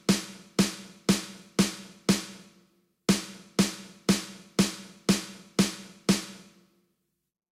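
Nothing stood out on listening; no technical faults could be heard anywhere in the audio.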